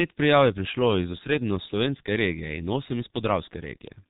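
G.723.1 codec damage runs through the whole speech clip and is heavy. Nothing above 4 kHz survives, so the sound is muffled, and the slowly updated 30 ms frame model at about 6.3 kbit/s leaves it hoarse, with consonants blurred into one another.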